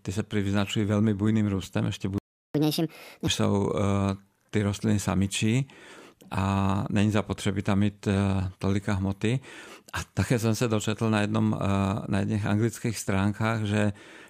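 At 2.18 s the speech cuts out. Silence lasts about 0.36 s, until 2.55 s. This is a playback stall. The player most likely ran short of data or its thread was blocked. The speech then resumes where it stopped.

From 2.55 s to 3.27 s comes catch-up at higher speed. The player resamples its backlog to regain the lost time. Speech runs 1.5 times faster. Pitch jumps up about seven semitones, giving a chipmunk quality. Then both drop back to normal.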